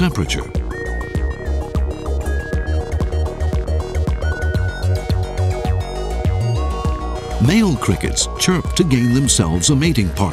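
At about 2.25 s the receiver dropped a stretch of audio that had fallen behind, probably discarded when the jitter buffer overflowed while later audio was already queued. Roughly a second of sound is gone, and nothing fills the hole. Playback simply leaps forward, with the material on either side of the missing second butted together almost seamlessly. The result is an abrupt skip ahead rather than a silence or a click of lost signal.

From 2.34 s to 5.47 s a jitter buffer speed-up follows, as the receiver works off the excess delay still held in its buffer. It repeatedly cuts out tiny slices, each one or a few pitch periods long, removing about half a second in total. Playback runs at 116% speed over that span without any rise in pitch, so the sound feels rushed and compressed in time until normal pacing returns after 5.47 s.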